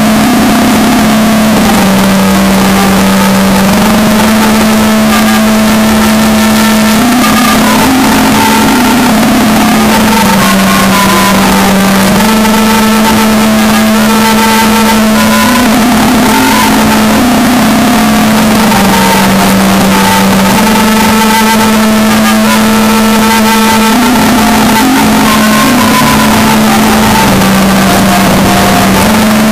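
The likely cause is a signed and unsigned mix-up: 8-bit samples written in one convention are being read in the other, so the top bit of every sample is flipped from start to finish. Each pass through zero becomes a leap from one extreme of the range to the other, and the result is a loud, harsh, buzzing distortion across the whole clip, with quiet stretches blasting out at nearly the same level as the loudest parts.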